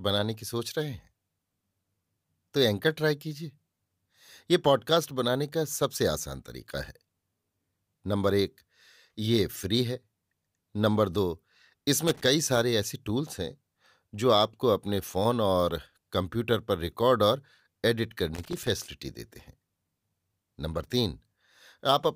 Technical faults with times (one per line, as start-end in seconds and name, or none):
12.08-12.21 loose connector crackle
18.34-18.68 loose connector crackle